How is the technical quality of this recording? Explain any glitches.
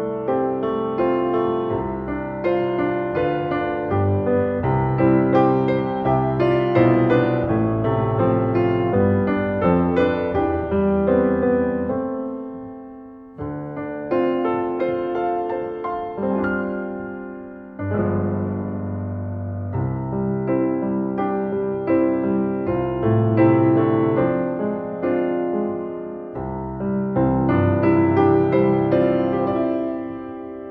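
No audible glitches or faults.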